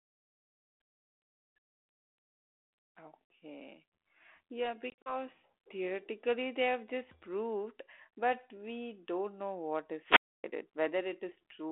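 Speech over a G.726 ADPCM line at 32 kbit/s, band-limited to about 300 Hz to 3.4 kHz with light codec grit, and it has two faults. From 4.9 to 5.15 s there's packet loss on the ADPCM call: about 100 ms of silent gaps scattered over 160 ms, the longest 40 ms, which points to around five lost packets. Speech comes back slightly off as the decoder's predictor resyncs. Then from 10.02 to 10.44 s there's a wireless microphone squelch dropout, with hiss rising before the receiver mutes for about 0.28 s and the sound returning afterward.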